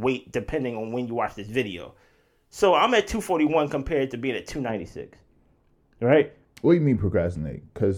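From 4.70 s, after "compared to being at", the speech turns dull and muffled to the end: de-emphasis applied wrongly, a treble cut of about 11 dB at 10 kHz.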